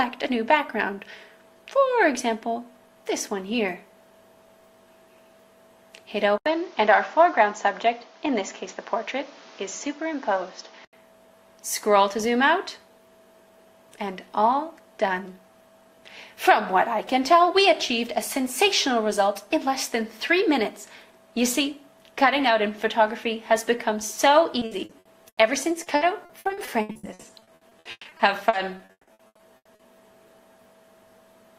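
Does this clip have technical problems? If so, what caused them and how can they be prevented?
Yes. From 6.38 s to 10.93 s the sound turns duller and narrower, with nothing above 7.2 kHz. An 80 ms silence marks the switch. The level shifts by roughly 5 dB. A new noise floor appears, roughly 35 dB below the signal. This is likely an input switched to a poorer device, such as a headset's call profile. Its band limit and noise replace the original microphone's character. Locking the input device in the system settings prevents this.

Repeated packet loss gives robotic sound in two stretches. The first runs from 24.59 s to 25.39 s, with five gaps. They are patched by extending the previous sound, and about a third of the span is concealed. The second runs from 25.83 s to 29.81 s, with many gaps up to 160 ms long. About 37% of that stretch is filled in, so it sounds choppy. A wired connection or a larger jitter buffer reduces this.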